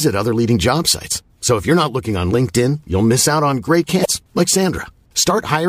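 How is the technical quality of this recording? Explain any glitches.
There is one audible glitch, at 4.01 to 4.06 s, from damaged data in a compressed stream. Corrupted bytes make the decoder misread those frames, lose sync and hunt for the next valid frame header. The speech breaks into a brief glitch lasting under 50 ms.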